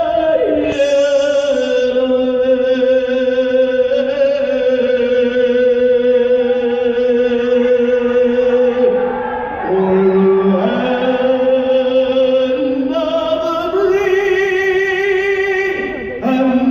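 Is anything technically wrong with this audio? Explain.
Yes. From 0.0 to 11.70 s there is wrongly applied de-emphasis: a treble-reducing filter acted on audio without matching pre-emphasis, so highs tilt steadily downward, about 10 dB lower at 10 kHz than at 1 kHz, leaving the sound dull and muffled.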